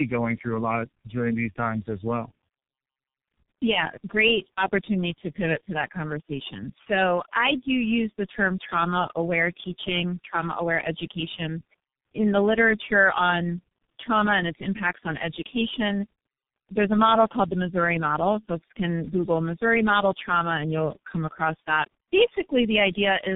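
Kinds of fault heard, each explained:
Tandem speech coding: the speech has passed through several speech coders in succession, each re-encoding the previous one's degraded output. Here the compounded roughness and warble fit four such stages ending in G.723.1, and nothing is heard above 3.7 kHz.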